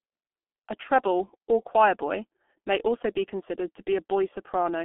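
From start to finish the speech sounds muffled and hoarse, with consonants smeared together and a rough edge. This is heavy damage from the G.723.1 codec. The audio sits inside a telephone band of roughly 200 Hz to 3.5 kHz, with nothing above 3.8 kHz, so brightness and sibilance are gone. Its 30 ms frames track the voice too slowly for quick sounds, and the coarse coding fits about 6.3 kbit/s.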